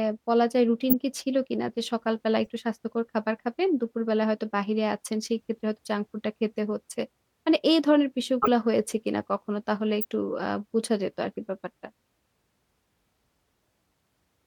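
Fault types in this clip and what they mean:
Corrupt frame decoded: Flipped bits inside compressed frames were decoded and played as if valid. Misread gains and codes put energy at the wrong frequencies. The speech is broken by brief chirps and noise bursts. They fall at 0.90–0.94 s, 2.45 s, 8.42–8.48 s and 10.01–10.05 s. Each lasts a few tens of milliseconds, which fits a few damaged frames. Three are loud, at about -10 to -15 dBFS. The one at 2.45 s is faint.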